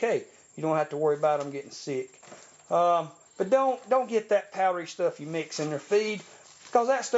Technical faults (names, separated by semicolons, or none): none